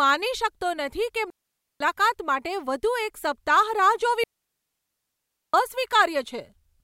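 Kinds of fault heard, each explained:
Digital wireless dropout: the receiver mutes when the radio link loses too much data, leaving clean holes of near silence in the speech, about 0.5 s from 1.30 s and 1.3 s from 4.24 s, with no noise burst at either edge. Waveform and spectrogram show flat, empty gaps with abrupt edges.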